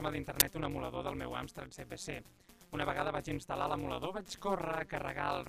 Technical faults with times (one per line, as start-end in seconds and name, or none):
0.00-5.48 overlap-add ripple
0.40 uninitialised buffer